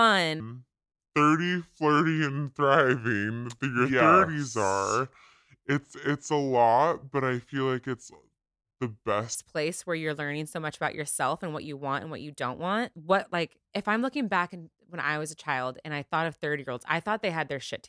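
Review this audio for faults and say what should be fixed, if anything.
From 0.40 s to 9.35 s the speech plays at the wrong sample rate. The samples are being clocked out more slowly than they were captured, with no resampling, which fits audio recorded at 32 kHz being played at 22 kHz. Speed and pitch drop together by the same ratio: the speech runs at about 0.69 times normal speed and sits roughly 6.5 semitones low, so it sounds slow, heavy and dragged. To prevent it, read the source sample rate and resample to the output device's rate instead of passing samples through unchanged.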